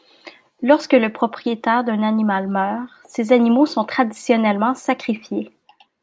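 No fault can be heard anywhere in the recording.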